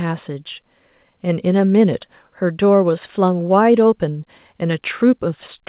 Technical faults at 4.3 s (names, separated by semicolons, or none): none